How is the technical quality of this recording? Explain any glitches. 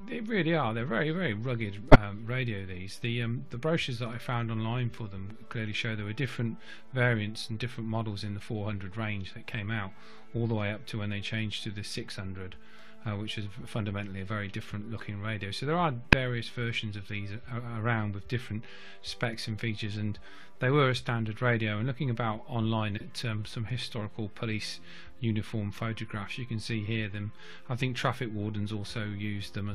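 The recording has three short glitches, each a corrupt frame decoded. Damaged bits in one or two compressed frames were decoded anyway, putting energy at wrong frequencies: a loud glitch at 1.91–1.96 s, a brief glitch at 16.12 s, and a quieter glitch at 22.97–23.02 s.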